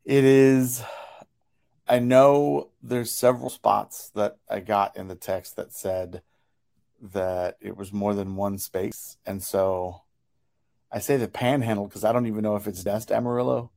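At 3.48 s, after "I know there's", 8.92 s, after "was more than one", and 12.86 s, after "I don't even know", the speech jumps ahead, skipping about 50, 50 and 100 ms, likely a dropped buffer (overrun) discarding samples.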